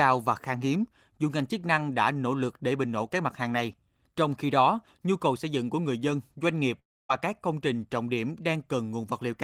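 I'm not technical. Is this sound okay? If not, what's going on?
No. At about 6.79 s the connection likely stalled, so roughly 0.3 s of audio never arrived. This is a long network dropout. The receiving end tried to cover the gap by stretching the last bit of speech into a short fading buzz, which then sinks into near silence for about a quarter of a second. The speech picks up again at 7.11 s, but whatever was said during that gap is gone for good.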